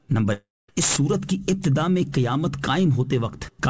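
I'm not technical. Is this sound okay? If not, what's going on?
No. From 0.33 to 0.69 s there's what sounds like a long network dropout, likely the connection stalling. The receiver smears the last bit of sound into a fading buzz, then goes silent for roughly a quarter second, and that chunk never comes back.

Then there's integer overflow: loud moments push the level past the maximum, and instead of flattening out they wrap around to the opposite extreme. You hear harsh cracks from 0.82 to 1.65 s, then single snaps at 2.14, 2.64 and 3.63 s.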